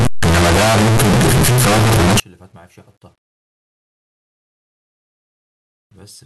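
The samples were likely read with the wrong signedness, 8-bit values with signed and unsigned mixed up, from 0.0 s to 2.2 s. That flips the top bit of every sample, so each zero crossing in the speech becomes a jump from one end of the range to the other. The opening of the clip is a very loud, harsh distortion, with quiet stretches blasting as hard as the rest. After 2.2 s the speech returns.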